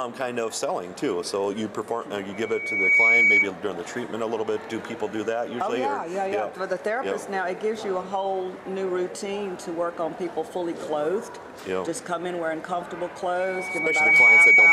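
Loudspeaker feedback squeal at 2.33 to 3.51 s and again from 13.39 s to the end: a microphone re-amplifies its own loudspeaker until a 2.3 kHz tone runs away, swelling within about a second to well above the sound, louder the second time.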